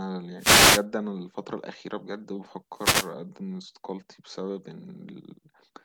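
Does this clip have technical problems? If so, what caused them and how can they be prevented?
Yes: the wireless microphone's FM signal faded as reflections cancelled, so receiver noise rose into wireless microphone noise hits, bursts of static swishing over the speech from 0.37 to 0.85 s and 2.74 to 3.13 s. Keeping a clear line of sight to the receiver and using diversity antennas prevents these dropouts.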